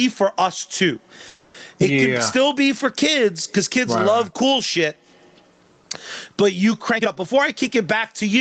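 Throughout, loud and soft parts are squashed closer in level, the gain swinging around 20 dB: gain pumping, likely from gain set far too high and clamped by a fast limiter.

Just after "for us too", from 1.27 to 1.56 s, the sound stalls, the last sound carrying on and fading, then resumes where it stopped. This call audio freeze likely comes from delayed packets emptying the jitter buffer, inserting about 270 ms with nothing lost.

From 6.96 to 8.30 s the speech runs hurried at unchanged pitch, about 118% speed. This is a jitter buffer speed-up, trimming roughly 0.3 s of pitch periods to cut excess delay.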